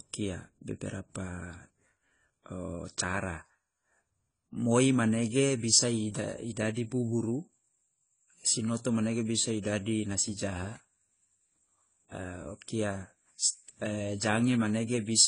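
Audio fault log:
Throughout: AAC compression. The speech comes across dull and smeared, with nothing above 10 kHz, so the top of the spectrum is simply gone. The codec damage is plainly audible: sibilants and held vowels pick up a fizzy, warbling texture because the encoder is starving the upper bands and quantising the rest coarsely against its hearing model. That's the signature of AAC-LC squeezed hard, likely somewhere around 24 kbps.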